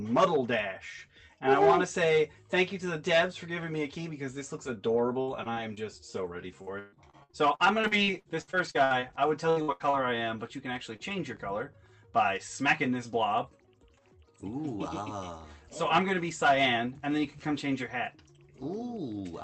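From 5.21 to 5.78 s, and again from 6.16 to 11.0 s, repeated packet loss (robotic sound) breaks up the audio. Holes of up to 138 ms, about a fifth of each stretch, are patched by extending the preceding sound, leaving it choppy with pieces missing.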